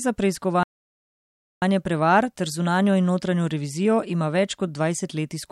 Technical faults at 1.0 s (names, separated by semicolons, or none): playback stall